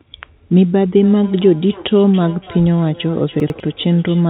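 From 1.03 s to the end, this speech clip carries faint repeats of each phrase, about 22 dB below the speech, returning roughly every third of a second: feedback echo between two devices, where one device's playback leaks into another's microphone. Between 3.4 and 3.6 s the audio jumbles, because chunks play out of order, with one 100 ms chunk arriving late and playing after its successor. The top end stops at 4 kHz, which fits a G.711 mu-law call path.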